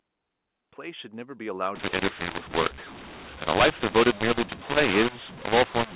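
A short bit of telephone speech, band-limited to 4 kHz as you'd expect from G.711, but from 1.75 s to the end there's a mu-law and A-law mix-up: A-law-coded samples decoded as mu-law. Levels get scrambled, so speech turns harsh and distorted, and the pauses fill with noise.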